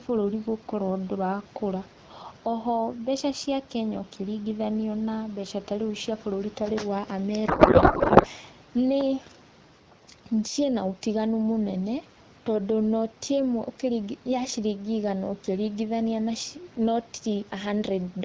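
Across the whole recording the level breathes. The loud and quiet passages sit unnaturally close together, squashed by a swing of around 5 dB. This is gain pumping. The likely cause is microphone gain set far too high, so a fast limiter or compressor keeps clamping down on every loud moment and releasing in the gaps.

From 7.47 s to 8.26 s the speech vanishes into a garbled, warbling noise that barely follows the rhythm of the talking. This is a codec payload misread. The decoder is unpacking valid-looking frames with their fields in the wrong places, which fits octet-aligned AMR frames being read as bandwidth-efficient. For that stretch it produces nonsense until both ends agree on the packing again.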